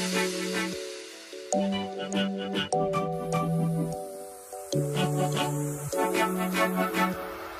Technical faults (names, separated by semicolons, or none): none